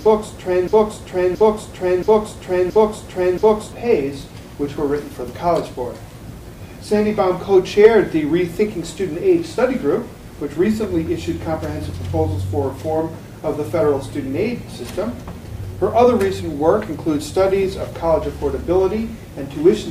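A broken-record loop runs from the very start of the audio to about 3.72 s, already under way when it begins: a 0.68 s fragment repeats exactly, back to back, five times. A stalled player or stream likely kept resending its last fragment, losing the intended audio.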